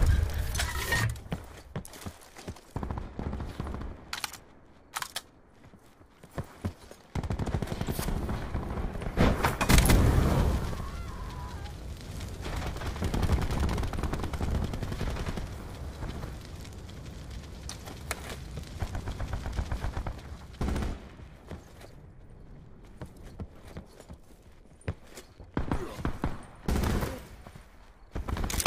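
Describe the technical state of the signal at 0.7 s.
At 0.7 s the signal is intact, with no dropout, distortion, or other fault present.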